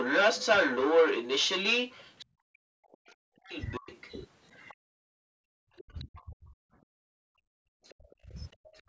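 From the start to 2.25 s the other side's voice is leaking through, well above the talker. It's likely the echo canceller leaving loudspeaker sound in the mic, and it returns at 2.95–4.11 s, 4.68–4.74 s, 5.76–6.23 s and 7.83 s to the end. From 2.24 to 3.9 s and again from 4.72 s to the end, speech is suppressed in double talk, with dips of roughly 40 dB, likely from the canceller ducking everything while both sides talk.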